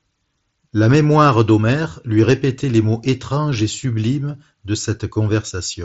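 Nothing in this speech clip stands out as a technical fault, just the usual Bluetooth mSBC headset link with its sound topping out at around 7.7 kHz.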